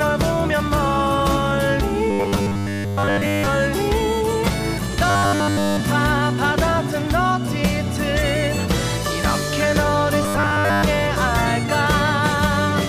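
The audio turns into robotic sound from repeated short buffers at 2.11–3.47 s, 5.10–5.80 s and 10.23–10.83 s: a rigid 100 Hz buzz, likely from 10 ms chunks being looped. Unlike a stutter, the repeats are too short to hear individually and fuse into a fixed pitch.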